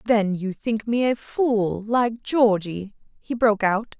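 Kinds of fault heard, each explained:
No faults can be heard.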